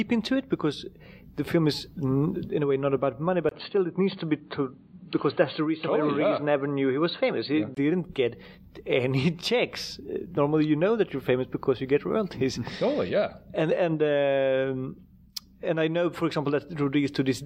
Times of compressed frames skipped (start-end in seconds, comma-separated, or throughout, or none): none